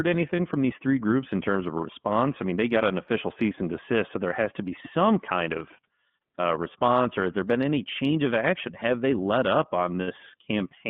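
The whole recording has passed through the iLBC codec, a narrowband VoIP coder. Its audible band runs from about 150 Hz to 3.5 kHz, so the speech sounds thin and boxed-in with no upper brightness. Codec damage is plainly audible as a rough, slightly synthetic texture on the voice. That roughness fits the 30 ms frame, 13.33 kbps mode, where each frame's excitation is coded independently and coarsely.

Between 0.36 and 0.40 s, a 30 ms stretch is missing and has been filled in by the decoder. This is lost iLBC frames, consistent with a single dropped packet. In place of the missing audio, the decoder repeats the last pitch cycle blended with noise, producing a brief held, faintly buzzy vowel-like sound. Because iLBC frames do not depend on earlier ones, the speech recovers cleanly right after the gap.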